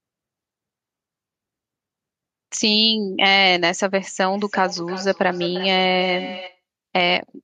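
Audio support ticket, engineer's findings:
Feedback echo between two devices, 4.33 to 6.61 s. Speech returns in repeats spaced roughly 300 ms apart, each thinner and more ringing, peaking about 14 dB below the direct speech. Probable cause: a second device in the same room on the call. Its playback re-enters the first device's microphone, outside the reach of either device's echo canceller, which only removes its own output. The loop then recirculates each word at a fixed delay.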